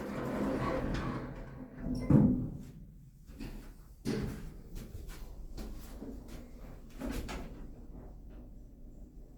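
From start to finish the sound carries generation loss, likely from being passed through a lossy codec about four times, with a character that fits Opus at around 64 kbit/s. Each re-encode quantised the signal on a shifted frame grid, so noise accumulated. The result is swirly and hollow, with smeared transients and softened attacks, although content still extends up to about 20.1 kHz.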